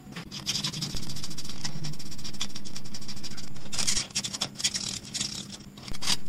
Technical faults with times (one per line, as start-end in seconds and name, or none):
0.95-3.97 DC step
5.92-6.29 DC step